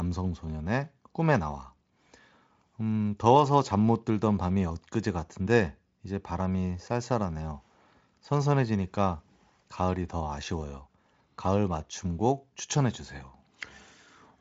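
No technical faults are audible in this speech recording.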